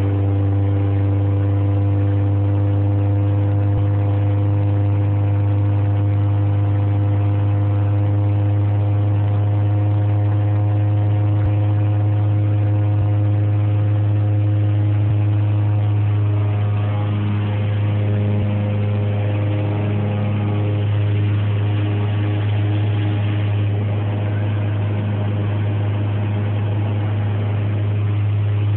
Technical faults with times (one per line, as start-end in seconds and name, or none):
3.76 compressed frames skipped
11.45 compressed frames skipped
15.09 compressed frames skipped
18.42 compressed frames skipped